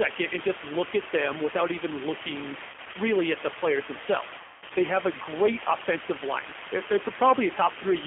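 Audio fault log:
Throughout: low bit depth with dither. The speech is carried on only about 3 bits, with dither added before rounding, so the rounding error becomes a steady, even hiss sitting only slightly below the signal. A spectrogram shows a flat noise floor across all frequencies, and the waveform looks thickly fuzzed.
Throughout: G.729 codec. The speech is rebuilt at 8 kbit/s from a vocal tract filter, a pitch predictor and a few pulses per frame, so it sounds rough and synthetic. The line band limits it to about 250 Hz to 3.4 kHz, and a spectrogram shows nothing above 4 kHz.
2.70–2.96 s and 4.38–4.72 s: VoIP packet loss concealed by the speech codec. About 100 ms of packets is lost, scattered over 240 ms, with runs of up to 40 ms. Later about 260 ms is lost over 320 ms, including one 200 ms run. Each time the decoder extends its last pitch and filter and lowers the gain frame by frame, so the sound smears into a buzzy, fading tone and stays weak for a while after packets return. 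A spectrogram shows smeared, repeated harmonic bands that dim, with the longer second gap plainest.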